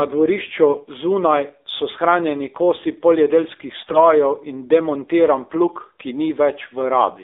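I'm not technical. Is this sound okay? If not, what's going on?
No. The speech went through the AMR narrowband mobile codec, the phone-call system that squeezes a voice into very little data. It keeps only roughly 300 Hz to 3.7 kHz and rebuilds the voice from a simple model of the throat. Here that makes the whole clip sound muffled, buzzy and plainly synthetic.

On top of that, AMR bit errors strike from 3.76 to 3.99 s. On a weak connection some less-protected pieces of data arrived flipped, but the check on the vital parts still passed, so the damaged data was played anyway. The voice keeps its pitch and loudness but turns briefly hoarse, scratchy and gargly.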